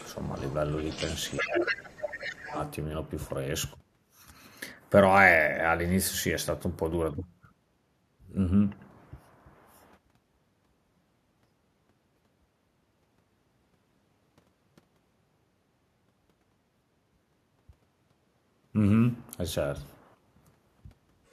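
The other side's voice leaking through runs from 0.0 to 1.82 s, sitting about 10 dB under the talker. It likely comes from loudspeaker playback that the echo canceller failed to fully strip from the microphone, leaving a second voice underneath. The same leak returns in short scraps at 1.98 to 2.26 s, again about 10 dB down, and at 2.45 to 2.71 s, fainter at about 20 dB down.

Speech suppressed in double talk spans 1.39 to 2.58 s, where the talker's voice dips by as much as about 20 dB and is affected for roughly a second in total. Both sides were speaking at once, and the canceller likely turned down everything because it couldn't separate the talker from the echo.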